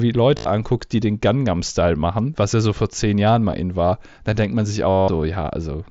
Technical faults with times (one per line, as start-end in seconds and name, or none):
0.37-0.46 concealed Bluetooth headset packet loss
3.51 concealed Bluetooth headset packet loss
4.89-5.08 concealed Bluetooth headset packet loss